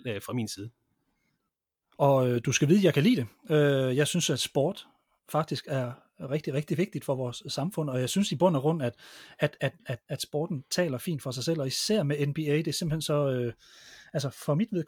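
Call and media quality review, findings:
Nothing to flag here; the speech comes through without any audible faults anywhere in the recording.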